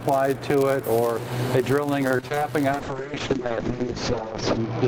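Throughout the clip, a block size mismatch (padded) means one stage hands over blocks slightly shorter than the next stage reads, so a sliver of zeros lands in every block. That produces a steady buzz at 99.6 Hz, and the audio runs about 0.4 percent slow (0.996 times speed) while keeping its normal timbre.

From 2.07 to 2.43 s, repeated packet loss (robotic sound) strikes. Six holes open in quick succession, the longest 31 ms, and each is patched by stretching the preceding sound, with about 100 ms lost in all. Patches cover roughly 37 percent of that span, giving a choppy texture with pieces dropping out.

At 2.72 s a call bitrate drop begins and lasts to the end. The encoder's bit budget collapses, with the coarser coding pointing to a fall from around 32 to about 6 kbps, and the audio band shrinks from 20 kHz to 8 kHz. The sound turns rough and muffled, at its worst for the last 1.86 s.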